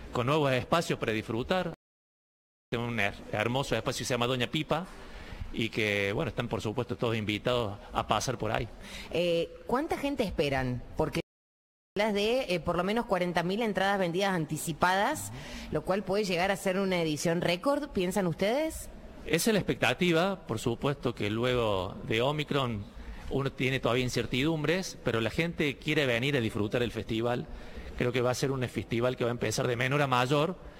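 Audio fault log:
1.74–2.72 s and 11.20–11.97 s: playback stall. The sound cuts off abruptly mid-flow and the output stays silent for about 0.98 s the first time and about 0.76 s the second, then resumes. The gaps sound like a hard dropout rather than a fade, which points to the player likely running out of buffered data or having its output thread blocked, so nothing reached the device until it recovered.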